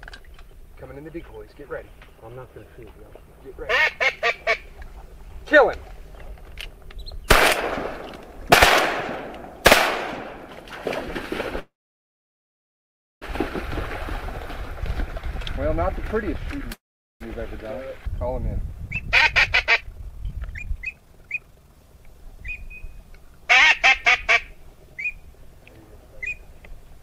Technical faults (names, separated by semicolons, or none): call audio freeze; jitter buffer speed-up